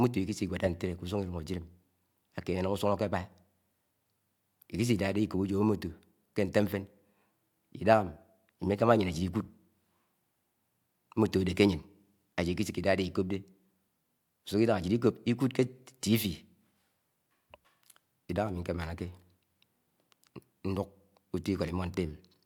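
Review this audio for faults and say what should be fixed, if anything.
No faults found; nothing needs fixing.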